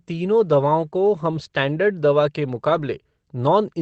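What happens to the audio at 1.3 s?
Around 1.31 to 1.33 s there's a lost packet rebuilt from error correction. A single 20 ms stretch got replayed from the low-bitrate backup copy in the next packet, so there's no gap, just a brief rougher, noisier patch.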